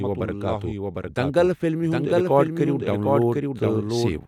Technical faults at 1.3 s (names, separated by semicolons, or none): doubled audio track